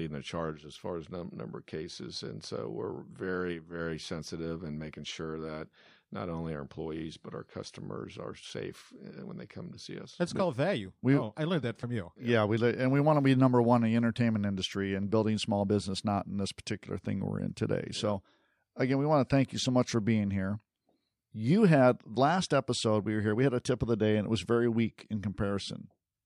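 Damaged data in a compressed stream breaks the decoding at 11.82 s and again at 15.68 s: corrupted bytes leave the decoder unable to read those frames until it finds sync again, and each spot comes through as a brief disruption in the speech, lasting only about 12 to 14 milliseconds.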